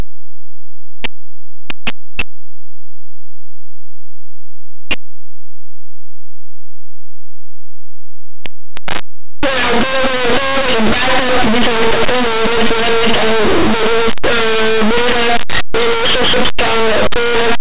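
From start to finish the speech is swamped by very loud, harsh distortion. This is linear audio read as companded: plain 8-bit samples decoded as mu-law codes.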